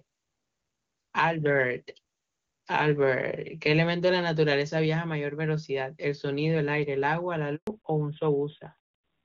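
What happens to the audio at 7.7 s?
A handover gap runs from 7.55 to 7.67 s: the call switched networks and no speech frames arrived for about 120 ms, so the speech fades out within a few tens of milliseconds and drops to silence. Whatever was said during that interval is simply missing.

Fallback to narrowband follows from 7.67 s to the end. The call leaves the wideband codec, which sounds consistent with AMR-WB at its top rate, for an older narrowband one, which fits AMR-NB at 12.2 kbit/s. Nothing above 4 kHz survives, so the speech turns duller and rougher.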